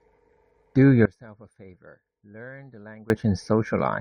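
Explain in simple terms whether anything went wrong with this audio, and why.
Something did go wrong. From about 1.05 to 3.1 seconds, the speech suddenly drops away and becomes very quiet, then returns to normal. The likely cause is one channel inverted. One side of the stereo signal was flipped upside down. When the two sides are mixed into one, the parts they share cancel each other out. The centred speech almost disappears, and only a faint trace remains.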